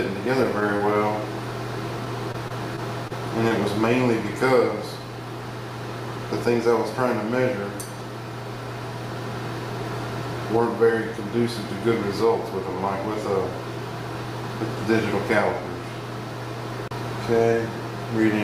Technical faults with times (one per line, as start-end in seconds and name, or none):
0.77-0.81 short concealed packet loss
2.05-3.12 repeated packet loss (robotic sound)
3.48-3.52 short concealed packet loss